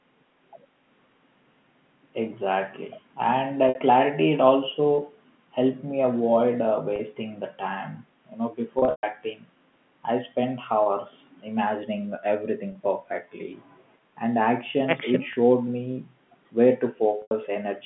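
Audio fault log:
3.69–3.75, 6.96–6.99, 8.79–9.03, 10.83–10.86, 12.72–12.75, 15.33–15.36, 17.22–17.31 s, packet loss with pitch repetition: Dropouts of 30 ms, plus 60 ms and 90 ms, fit lost 30 ms packets. The receiver repeats the last pitch cycle, so the short ones sound briefly buzzy and held. On a spectrogram, frozen horizontal harmonics end at the 3.4 kHz line edge. In the waveform, identical cycles repeat. The 8.79 s burst loses 180 ms scattered over 240 ms, with a 120 ms run that fades to a flat silent trace before the sound cross-fades back.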